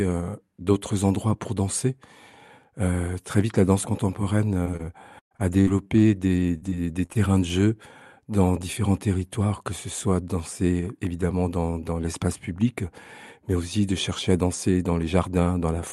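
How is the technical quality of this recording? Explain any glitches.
The recording has one clear glitch, a burst of repeated packet loss (robotic sound) in the middle of the speech. The audio also passed through a call path whose top end stops around 12 kHz, consistent with an Opus call codec.

From 4.41 s to 7.39 s, between "très vite la danse" and "de jeu dans différents", the speech breaks up into a run of about a dozen short dropouts, the longest about 118 ms. Packets went missing or arrived too late, and each hole was covered by extending the preceding sound. In total roughly 0.4 s was rebuilt this way, about 13% of that stretch. The repeated synthetic patches give the passage a choppy texture with fragments of the speech missing.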